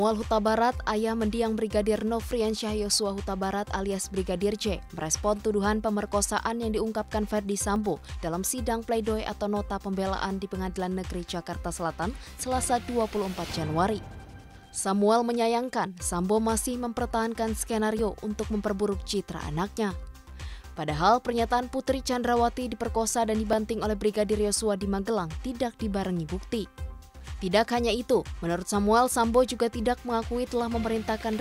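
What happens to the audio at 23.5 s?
A dropped buffer (overrun) hits at 23.53 s. The sound jumps slightly forward, with no gap of silence. The likely cause is that the program fell behind in reading its incoming samples, so the hardware overwrote a block before it was collected. That block, around 10 ms of audio, is simply missing, and the material on either side is butted together.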